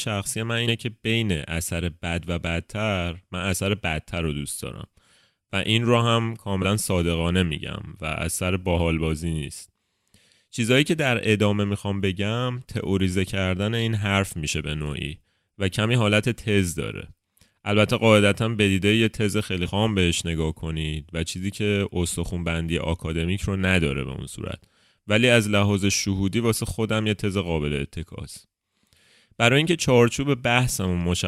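Compressed frames skipped at 0.67–0.72 s, 6.62–6.65 s and 19.65–19.69 s: at each point whole frames of the encoded speech never reach the output, so the audio jumps forward by roughly 50, 70 and 100 ms. The jumps come in steps consistent with 10 ms frames.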